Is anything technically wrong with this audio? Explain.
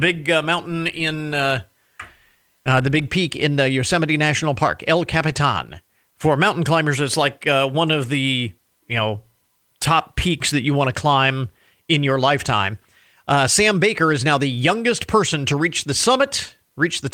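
No, the speech comes through in a sound technical state, carrying the light touch of Opus voice compression that fits a hybrid, fullband setting at around 24 kbps, with nothing amiss in the signal.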